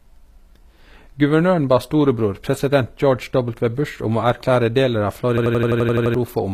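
From the start the whole clip has a gritty, metallic top end, with s sounds going lispy and nothing above about 14.9 kHz. That's likely HE-AAC compression, with the treble rebuilt from copied lower bands, which fits a low bitrate.

Then at 5.38 s, right after "å erklære deler av", there's a system hang loop until 6.14 s: one 85 ms slice repeats nine times at 11.7 Hz, a machine-gun stutter. The system froze while the hardware kept cycling a buffer that fits 4096 samples, losing roughly 0.7 s of audio.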